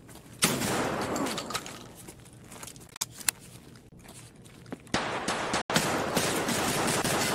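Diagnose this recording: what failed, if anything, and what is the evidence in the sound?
The failure sits at the playback stage, most likely a Bluetooth dropout on the wireless link. From 2.88 to 3.01 s the sound cuts out in several gaps totalling 80 ms, the longest 40 ms, scattered across about 133 ms. At 5.61 to 5.70 s there is another 80 ms hole. After each gap the sound resumes further along, as though it had kept playing, which fits late packets being discarded (about six per event) rather than delayed.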